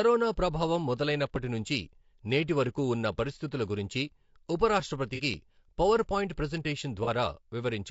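Throughout the speech, a short-frame encoder is likely at work, consistent with low-delay AAC compression at a low bitrate near 32 kbps. Its brief frames resolve pitch harmonics poorly, so voices sound plainly rough and grainy, with noise between harmonics and a synthetic-sounding top band.

From 5.15 to 5.20 s, and again from 7.04 to 7.09 s, AAC frame loss with concealment occurs. Each gap fits a single dropped frame that the decoder rebuilt from the previous spectrum, leaving a brief smeared, noisy patch instead of silence.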